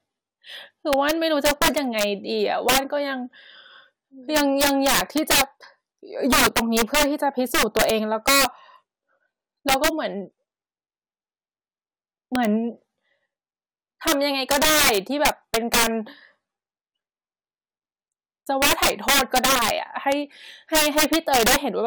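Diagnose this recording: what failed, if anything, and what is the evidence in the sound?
Violent, sharp cracks burst out of the louder moments of the speech throughout the recording, far harsher than ordinary clipping. This is integer overflow at a gain or sample-format conversion stage. The signal was driven roughly 10 dB too hot, and instead of being limited, peaks past the largest integer value wrapped around to the opposite sign, leaping across the full range. Only a couple of percent of samples cross that limit, so the cracks follow the loudest peaks.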